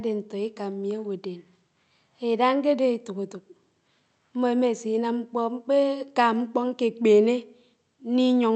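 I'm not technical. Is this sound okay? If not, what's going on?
Yes, no faults heard.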